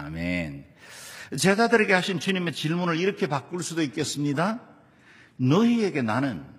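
Speech clip where, at 1.36 s, the adaptive stream drops to a lower bitrate without a gap. From there to the end it loses everything above 12.3 kHz and gets grainier, consistent with a switch to a low-rate HE-AAC-style stream.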